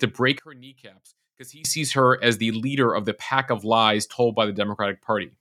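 One channel inverted, from 0.39 to 1.65 s, just before "sees her as the": in this speech clip the centred voice drops by about 23 dB, likely because one stereo channel has reversed polarity, so the shared content cancels when both channels are summed to mono.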